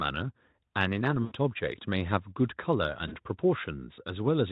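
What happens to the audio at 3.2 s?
Just before it, from 3.07 to 3.16 s, VoIP packet loss concealed by the speech codec: about 40 ms of packets vanished, so the decoder extrapolated a fading, buzzy tone or coloured noise, and the weakened sound lingers afterward.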